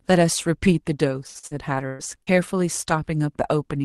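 Choppy, robotic speech runs from 1.27 to 2.30 s, where the sound breaks up into five short holes, the longest 121 ms, with roughly a third of that stretch filled in by a smeared continuation of the preceding sound. This is repeated packet loss: packets kept arriving late or not at all, and the decoder covered each gap by extending the last audio it had. The speech comes through a call codec whose top end stops near 12 kHz, consistent with Opus at a low bitrate around 24 kbps.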